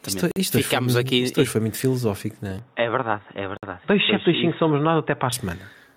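A speech clip with gain pumping throughout: the level dips by a few decibels under each loud syllable, likely from a fast limiter pulling down gain set too high. On a waveform the envelope looks squashed. Bluetooth stalls cut the sound to silence at 0.31 to 0.36 s (48 ms) and 3.57 to 3.63 s (55 ms), likely from interference delaying packets until the headphone buffer ran dry. Each appears as a flat gap in the waveform and a blank vertical stripe on a spectrogram. Just after "muito filosófico não é", at 2.59 s, the input likely switches to a poorer device, with no gap at the switch and about the same level. Until 5.33 s the sound turns dull, with nothing above 3.8 kHz and a faint new noise floor far below the speech. A spectrogram shows the upper band abruptly emptying over that stretch.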